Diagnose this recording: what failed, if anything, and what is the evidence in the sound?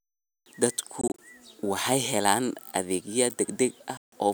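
The failure is at the playback stage, on the wireless link to the headphones, and is likely a Bluetooth dropout. From 1.01 to 1.19 s, just before "waxay helaan adeegyo", the speech breaks into short silent holes. About 85 ms are lost across 170 ms, and no gap exceeds 21 ms. From 3.97 to 4.13 s the speech loses about 149 ms. After each hole the speech resumes further on, as if it had kept playing, which points to late packets being discarded.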